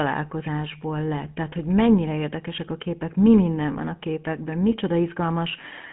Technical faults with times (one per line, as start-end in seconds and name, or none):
0.00-5.93 GSM full-rate codec